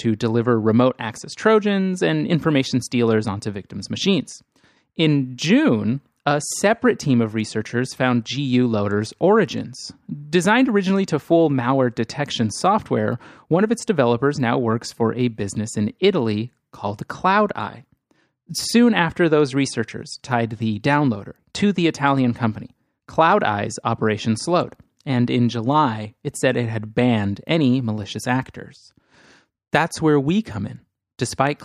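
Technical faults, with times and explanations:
Nothing technical stands out anywhere in this speech recording, so there's nothing to flag here.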